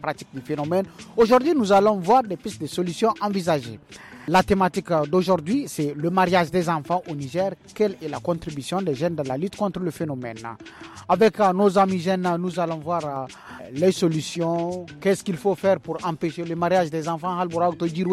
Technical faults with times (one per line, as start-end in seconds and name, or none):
none